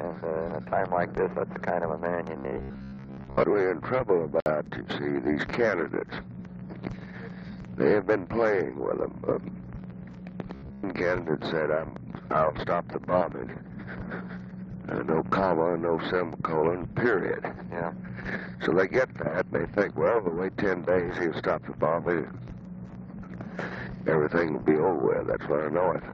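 From 2.37 to 3.44 s the sound collapses into a rigid, metallic 66.7 Hz buzz. This is robotic sound from repeated short buffers, likely caused by audio arriving too seldom, so a 15 ms slice is looped and most of the real signal is skipped. On a spectrogram it appears as evenly spaced vertical striations, and the waveform shows roughly repeating 15 ms cycles.

From 4.40 to 4.46 s a 57.5 ms gap opens at a join of encoded pieces. Separately encoded segments were butted together with their start delay and end padding left in. The waveform drops to a flat line with smeared edges, the spectrogram shows a blank vertical band, and the sound resumes where it stopped.

The same robotic buzz at 66.7 Hz returns from 10.55 to 10.88 s, with the same striated spectrogram pattern.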